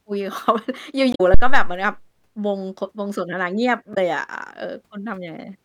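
At 1.11 s the compressed stream carries damaged data: a stretch of bytes arrives wrong, so the decoder misreads the frames, loses sync and hunts for the next valid frame header. For about 0.1 s, up to 1.21 s, the speech gives way to a short glitch.

At 1.34 s a phantom power thump follows, as a supply switched on or off on the live input sends a voltage step through the coupling capacitors. It sounds as a deep, low thud whose main energy decays in about 111 ms, with the disturbance lasting until 1.84 s.

At 3.91 s the damaged data in the compressed stream recurs, with the decoder again losing frame sync. It produces a second brief glitch, ending at 3.98 s.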